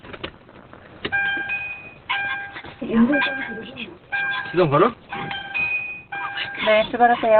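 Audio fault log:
throughout, Opus compression: nothing above 4.2 kHz, and the sound is muffled and hoarse, likely from the codec's narrowband speech mode at a bitrate near 12 kbps.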